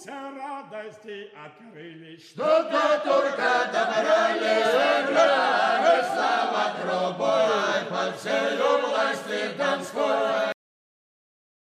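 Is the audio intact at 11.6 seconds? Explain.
No. At 11.6 s the clip is inside a cut-off end, which begins at 10.52 s and runs to the end of the file at 11.68 s. The final buffers were never written, so the sound stops abruptly in mid-event and falls straight to digital silence with no natural decay. On a waveform the trace drops to a flat line at 10.52 s. On a spectrogram the energy ends in a sharp vertical edge followed by blank space.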